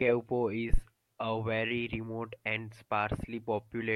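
At 0.74 s a supply, most plausibly phantom power, was switched on a live input, and the voltage step ran through the coupling capacitors as a phantom power thump: a deep low thud peaking at about -12 dBFS, decaying within 14 ms and gone by 0.80 s.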